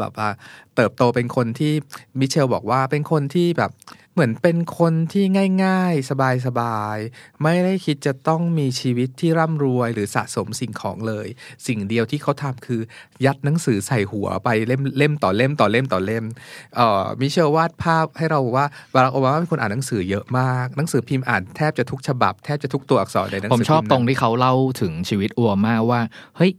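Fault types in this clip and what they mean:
No technical faults can be heard anywhere in this speech recording. There is nothing to list for it.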